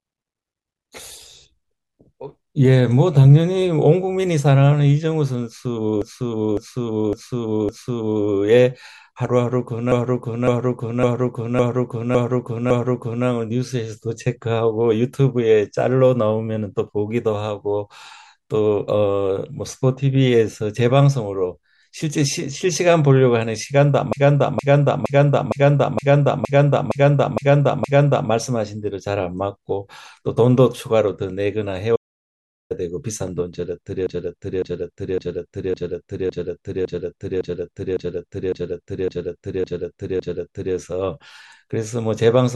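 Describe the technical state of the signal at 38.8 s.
At 38.8 s you're inside a repeated-frames stretch running from 34.07 to 40.75 s. A 557.3 ms block of compressed frames gets played over and over, twelve extra times, so the speech stutters and runs about 6.7 s longer.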